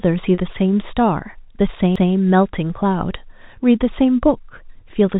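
At 0.35 to 0.40 s, short concealed packet loss: 30 ms of audio missed the decoder, which extended the preceding sound to cover the gap, heard as a brief smear. At 1.96 s, a CD skip: the laser jumped to another turn of the spiral, muting for a split second and resuming elsewhere, heard as a tick and jump.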